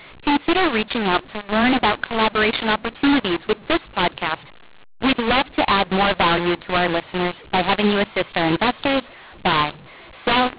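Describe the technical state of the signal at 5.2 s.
At 5.2 s, as throughout the clip, A-law telephone samples are being decoded as mu-law, a mu-law and A-law mix-up. The scrambled levels make the speech harsh and distorted, with noise lifting the quiet stretches above silence.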